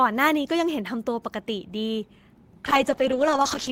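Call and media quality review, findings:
Call bitrate drop, 2.66 s to end of clip (3.72 s). Speech turns rough and muffled, with a watery smear. Encoder/bandwidth estimator: coarser coding at reduced rate, consistent with roughly 32 kbps falling to about 9 kbps. Spectrogram: energy above a few kHz cut away abruptly at 2.66 s, with blocky, smeared texture below. Waveform: little visible change in level; the damage shows in the spectrum, not the envelope. No recovery before the clip ends.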